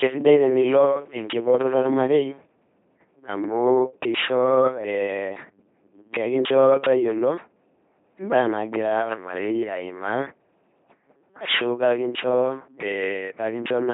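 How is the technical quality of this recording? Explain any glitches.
The technical quality is poor: the whole recording has passed through an LPC-10 vocoder, heavily damaging the speech from start to finish. Each moment is rebuilt as either a buzzy pulse train or hiss driving a simple vocal-tract filter, so the voice turns mechanical and robotic, with buzz or hiss wherever voicing is misjudged. Nothing sounds above 3.9 kHz, and the coarseness fits a 2.4 kbit/s rate. Unlike dropout-driven robotic glitches, the effect is constant, not intermittent.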